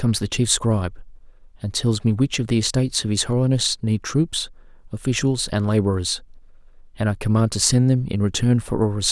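No technical faults can be heard anywhere in the speech.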